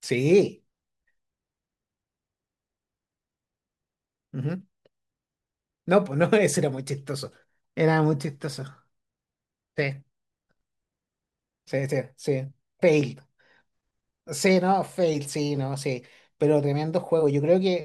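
No technical faults occur in this audio at any point.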